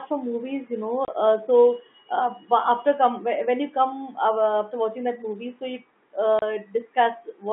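At 1.05 s the speech drops out for 30 ms, and at 6.39 s, right after "that movie so you", there is a second 30 ms hole. Both holes have hard edges. This is packet loss filled with silence. Each gap points to one lost packet, and the receiver played silence in its place rather than concealing it. The surrounding G.711 telephone band carries on unchanged around each hole.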